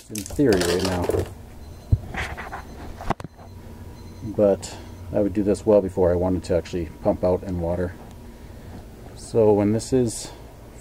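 At 1.22 s there's a tiny tick where a block of digital silence drops in, just 0.73 ms of zeros, which fits a 32-sample buffer that wasn't filled in time. It's so short the two hard edges merge into one sharp click rather than an audible hole.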